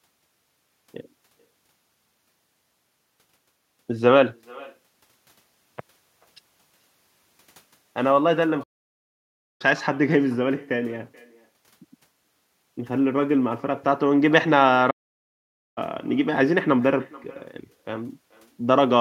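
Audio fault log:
throughout, echo with no canceller: At the far end the call is coming out of a loudspeaker, that end's microphone picks it up again, and nothing there subtracts it before it is sent back. The speech therefore returns after the network round trip, roughly 0.4 s late and about 24 dB below the original. Every phrase is trailed by a faint, thin copy of itself.
8.63–9.62 s and 14.90–15.78 s, playback stall: The player most likely ran short of data or had its output thread held up, so it produced nothing until it could resume. The speech cuts out in mid-flow for 0.97 s in the first gap and 0.86 s in the second, then carries on. Each silence is long and abrupt enough to read as a hard break rather than a natural pause, and it interrupts the rhythm of the speech both times.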